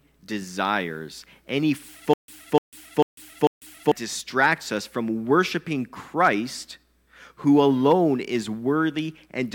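At 2.13 s, after "desires any", a stutter with silent gaps runs to 3.92 s. A 298 ms fragment repeats four times, each followed by 148 ms of digital silence, on a steady 445 ms cycle. A stalled stream likely replayed its last buffer, and the speech before "distracts us from worshiping" is lost.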